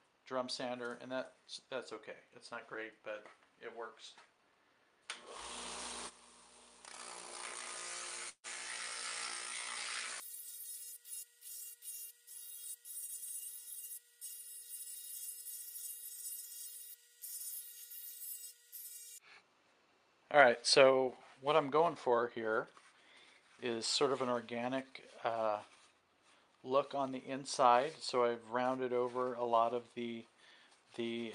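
From 8.29 to 8.47 s the sound stops and a brief decaying buzz fills about 143 ms, with roughly 60 ms of silence. This call audio freeze was likely caused by delayed packets draining the jitter buffer. Playback then resumes where it paused, with nothing lost.

At 13.06 to 13.11 s the audio skips ahead: around a tenth of a second is missing, and the two sides are joined almost directly by a 17 ms fill. Audio was dropped while later packets were already queued.

From 21.71 to 22.66 s the sound runs faster at unchanged pitch, about 109% speed, and about a tenth of a second is trimmed. From 29.78 to 30.28 s it speeds to 111%, losing around 70 ms. Each is a jitter buffer speed-up, where the receiver cut short pitch-period pieces to shrink excess buffered delay.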